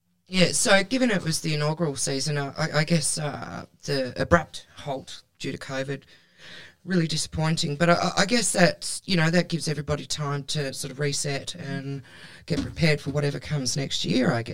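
From start to finish the speech carries channel delay (comb filtering): one channel lags the other by around 10 ms, and summing them cancels shared content at evenly spaced frequencies from near 40 Hz upward. It sounds hollow and phasey, and a spectrogram shows fixed horizontal notch stripes.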